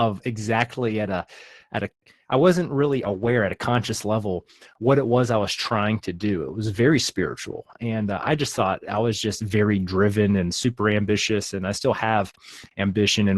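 At 0.87 s and again from 3.05 to 3.27 s, you get a lost packet rebuilt from error correction: the decoder fills in from lower-quality backup copies, so the Opus audio turns briefly rough and noisy instead of dropping out, the second patch lasting about 120 ms.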